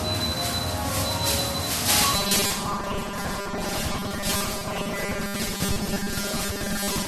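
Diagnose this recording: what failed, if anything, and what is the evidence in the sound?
The damage sits at the codec stage, and MP3 compression is the likely cause. It runs through the whole clip. The damage is plainly audible. Weak frequency components drop in and out between frames, giving a watery, swirling texture, and attacks lose their edge. That level of loss points to a low bitrate, around 48 kbps.

From 2.13 s to the end at 7.08 s, the sound turns into a rigid, metallic buzz at 200 Hz. This is robotic sound from repeated short buffers, and the stage is the driver or buffer. New audio arrives too seldom, so the last short chunk is played again and again. A 200 Hz buzz fits a repeated chunk of 5 ms. Roughly half of what is heard is repetition, and the real audio in those gaps is skipped.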